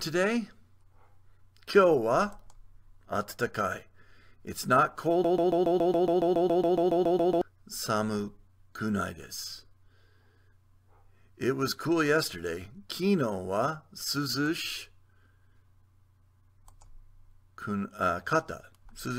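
From 5.24 s to 7.41 s the sound sticks in a broken-record loop: a fragment of about 139 ms plays back to back, identically, 16 times, and whatever belonged in those two seconds never arrives. It sounds like a rapid mechanical stutter, roughly seven repeats per second. The likely cause is a stalled player or stream resending its last buffered fragment. On a waveform the same shape tiles exactly; a spectrogram shows a copied block repeating in vertical stripes.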